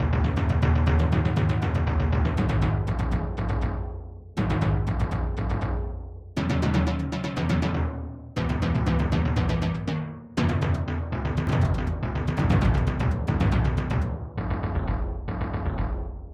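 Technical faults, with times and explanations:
11.47 s to the end (16.34 s), doubled audio track: a second full-band copy of the sound enters abruptly and runs behind the original by about a second, at roughly the same level. It has no decay or room colouring, so it doesn't read as a natural echo. It sounds like two identical streams out of step. The likely cause is the audio being captured a second time through a slower path, or an edit leaving two offset copies in place.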